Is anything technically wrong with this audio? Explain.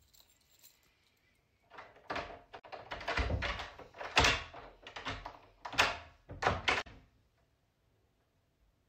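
Yes. Damaged data in a compressed stream disrupts the audio twice, from 2.56 to 2.64 s and from 6.78 to 6.87 s. Corrupted bytes make the decoder misread frames and lose sync. Each spot sounds like a brief blip, under a tenth of a second.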